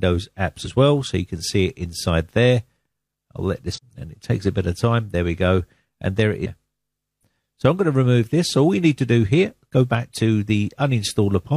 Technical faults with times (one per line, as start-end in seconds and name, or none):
3.72-3.79 damaged data in a compressed stream
6.41-6.47 damaged data in a compressed stream